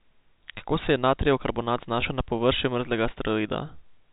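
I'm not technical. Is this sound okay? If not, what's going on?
No. At 2.01 s the speech briefly catches, as if one sound is held a fraction too long with a slight buzz. This is packet loss with pitch repetition. About 10 ms of audio went missing in transit, which fits a single lost packet, and the receiving end filled the gap by repeating the last stretch of the voice's pitch. The telephone-quality G.711 coding doesn't cause this hiccup.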